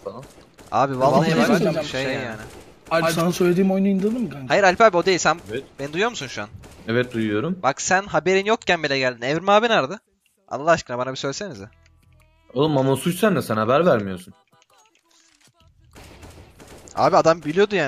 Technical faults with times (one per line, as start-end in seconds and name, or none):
1.01-3.21 doubled audio track